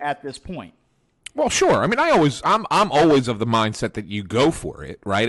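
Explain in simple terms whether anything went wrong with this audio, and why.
Nothing went wrong that could be heard: listening closely to this speech recording, no moment stood out as a problem.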